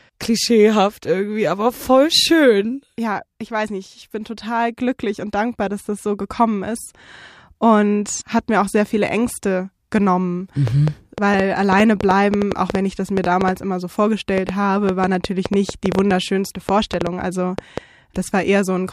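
From 10.7 s to 17.8 s a train of clicks, around forty similar ticks at about five per second but unevenly spaced, pops well above the speech and into its pauses, likely from interference. Spectrograms show thin broadband vertical lines; waveforms show narrow spikes.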